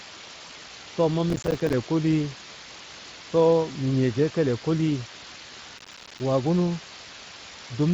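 Speech clip with two faults throughout and three short events. Low bit depth with dither produces a constant, even hiss across the whole recording, sitting only around 10 dB below the signal. The rounding error has been turned into steady white noise rather than distortion, and the level suggests very coarse quantisation, roughly 5 bits. The hiss never changes with the level of the speech, which shows it is a property of the sample resolution and not background noise in the room. Speex codec damage is also plainly audible throughout. The speech sounds noisy and hoarse, with the grainy, slightly synthetic texture of a CELP coder that has too few bits for its excitation signal, consistent with a Speex mode around 20 kbps. At 0.47 to 0.51 s, VoIP packet loss concealed by the speech codec shows up as a brief stretched, fading stretch. The decoder filled the gap by extrapolating its last pitch and filter settings, which points to one lost 20 ms frame. 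Because each decoded frame builds on the previous one, the sound stays weak or distorted for a short time after normal packets resume. Processor overload crackle occurs twice, at 1.30 to 1.73 s and again at 5.78 to 6.20 s. Each burst is a gritty, tearing crackle laid over the speech, made of rapid hard-edged dropouts to silence. This is what happens when the processor misses a few dozen buffer deadlines over a short stretch, and the dropout spacing fits buffers of around 5 ms. Both bursts stop abruptly once the load eases.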